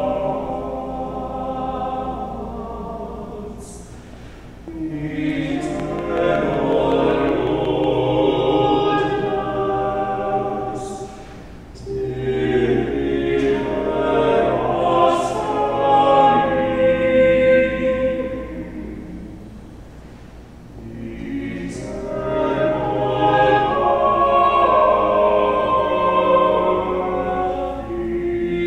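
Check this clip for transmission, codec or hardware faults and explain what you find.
There's one fault, a train of clicks running from 5.80 to 7.85 s. Across those two seconds you get about ten sharp, near-identical ticks at an even 5.4 per second, poking out roughly 10 dB above the surrounding sound. A steady run of same-shaped pulses like that is likely something injecting spikes into the path, such as interference from nearby gear or a faulty connection or power supply, rather than anything in the source itself.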